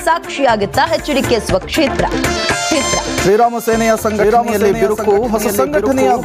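Gain pumping runs through the whole recording: the gain swings by about 15 dB as it is pulled down on each loud sound, leaving the dynamics flattened and squashed. The likely cause is input gain set far too high, with a fast limiter clamping each peak. From 2.71 s to the end, a doubled audio track appears. A dry, full-band copy enters abruptly and trails the original by about a second at roughly 5 dB lower, without decay or room colour.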